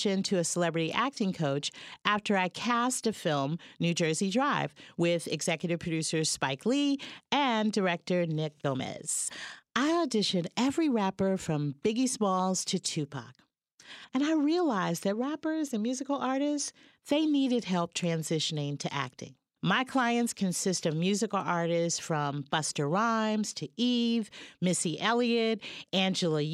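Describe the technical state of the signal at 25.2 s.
At 25.2 s the speech comes through intact, with no dropout, distortion, glitch or other fault.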